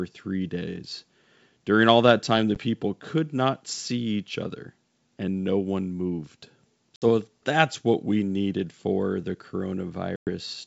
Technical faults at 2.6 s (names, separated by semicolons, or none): packet loss on an ADPCM call